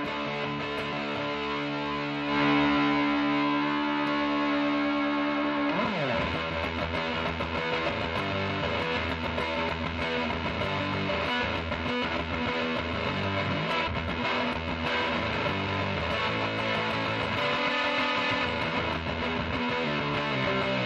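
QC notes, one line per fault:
0.92 s, 5.43 s, 13.86–13.88 s, 19.21–19.23 s: compressed frames skipped. The audio jumps ahead about 150, 100, 100 and 150 ms as whole coded frames go unplayed, likely missing or rejected as damaged. Unlike a dropout, nothing goes silent; time simply vanishes at a brief join.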